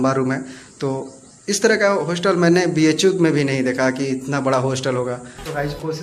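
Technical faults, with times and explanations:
Nothing technical stands out here; the audio holds together nicely the whole way, with no glitches worth flagging.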